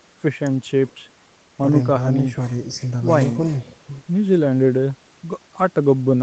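No technical faults are audible.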